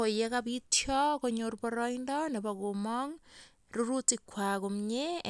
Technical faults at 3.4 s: none

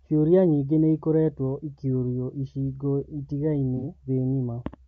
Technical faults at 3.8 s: low-delay AAC compression; AAC frame loss with concealment

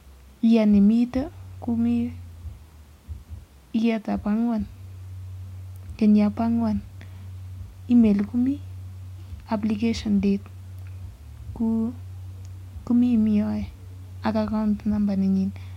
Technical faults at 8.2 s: none

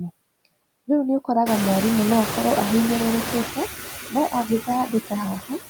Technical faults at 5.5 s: noise suppressor artifacts; speech cut by the noise suppressor

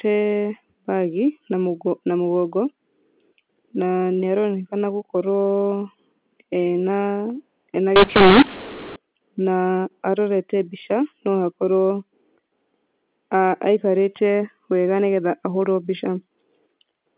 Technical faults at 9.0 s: mu-law and A-law mixed up

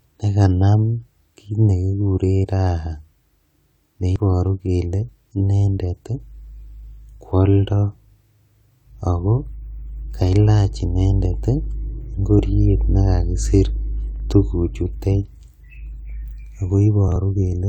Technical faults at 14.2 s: chunks out of order

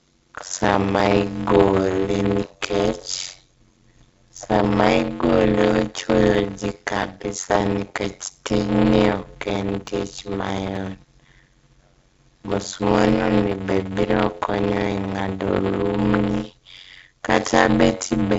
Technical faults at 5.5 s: block size mismatch (padded); clock slip clicks

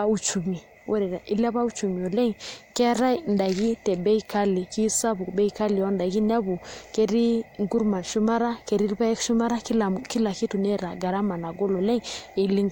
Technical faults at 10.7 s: none

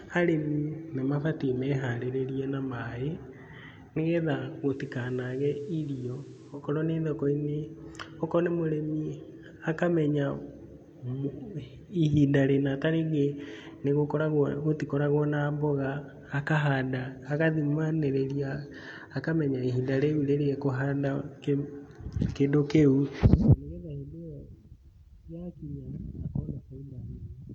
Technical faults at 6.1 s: digital radio blending to analogue

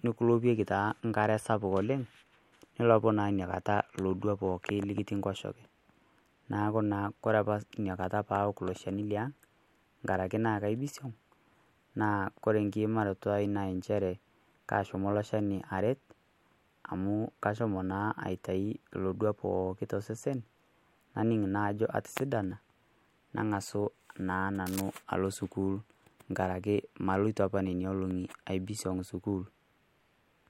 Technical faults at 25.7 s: none

